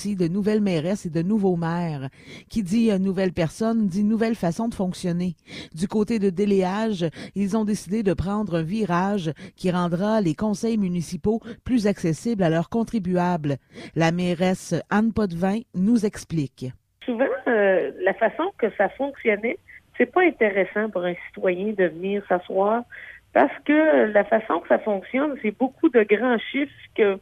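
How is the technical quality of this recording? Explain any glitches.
No glitches come through anywhere in the recording, and the signal holds steady and intact from its opening moment to its last.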